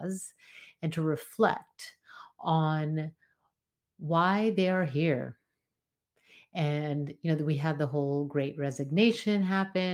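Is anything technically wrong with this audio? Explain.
No, nothing technically wrong can be heard in this speech recording.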